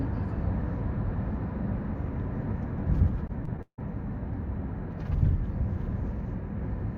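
The clip is everyday sound. From 3.27 to 3.93 s there is repeated packet loss, giving a robotic sound. Data went missing again and again in that stretch. Each hole was patched by repeating the last bit of audio, which fits about five separate gaps. The longest gap is 159 ms. Around 211 ms is filled this way and 220 ms is simply missing. Concealment covers 38% of the span, so the sound turns choppy there.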